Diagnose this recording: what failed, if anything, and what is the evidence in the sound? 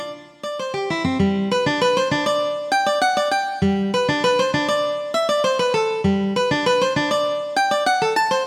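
No failure is audible anywhere in this recording.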